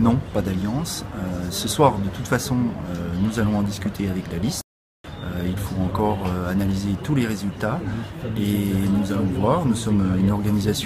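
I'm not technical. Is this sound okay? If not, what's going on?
No, not quite. At about 4.61 seconds the sound just cuts out and goes completely silent, then comes back at around 5.04 seconds, so there's a gap of roughly 0.43 seconds right in the middle of things. That's what's called a playback stall. The likely cause is that the player briefly ran out of audio to play, or got held up doing something else, and simply output nothing until it caught up again.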